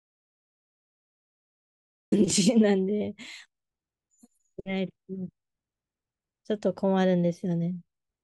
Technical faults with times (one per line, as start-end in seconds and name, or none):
0.00-2.12 audio dropout to silence